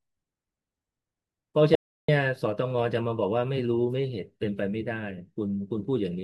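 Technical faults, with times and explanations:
1.75–2.08 s, audio dropout to silence: speech cuts abruptly to silence for 0.33 s with no room tone, unlike a pause; likely a lost input link.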